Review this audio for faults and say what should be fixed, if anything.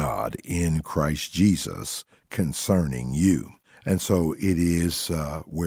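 Nothing here needs fixing; no faults were found.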